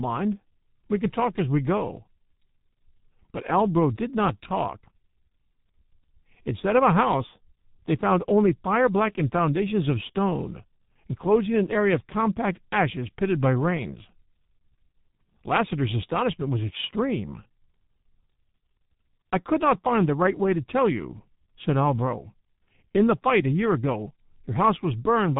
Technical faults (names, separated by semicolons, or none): G.723.1 codec